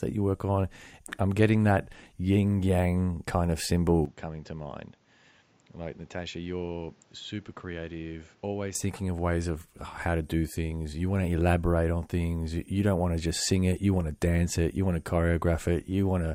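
From 4.05 s, right after "yin yang kind of", the speech abruptly turns duller and boxier, drops to roughly 10 dB quieter, and picks up a new background hiss sitting well below the voice, around 30 dB down. Nothing is heard above 7.6 kHz. There is no gap at the change. At 8.75 s, just before "thinking of ways of", the fuller sound returns. This is likely an input switched to a poorer device, with recording briefly moving to a narrower-band microphone.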